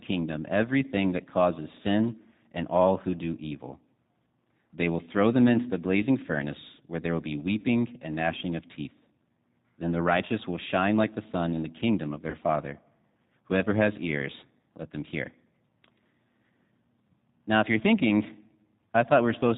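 Throughout, the speech carries the sound of the G.729 codec, and the damage is plainly audible. The voice is rebuilt from a vocal tract model, a pitch predictor and a few pulses per frame. It has a rough, slightly synthetic texture, which fits an 8 kbit/s G.729A stream. Nothing above 4 kHz survives, so sibilants are dull and the top end is missing.

At 7.60 s, just after "where there will be", there is VoIP packet loss concealed by the speech codec. About 40 ms of audio is missing, which fits four lost 10 ms frames. The decoder fills the gap by extending its last pitch and filter while lowering the gain. The result is a short, stretched sound that fades. The voice stays thin for a moment before "and gnashing of teeth".

At 12.30 s, after "in the kingdom of", the same concealment recurs over about 30 ms. Again a brief smear replaces the speech and fades.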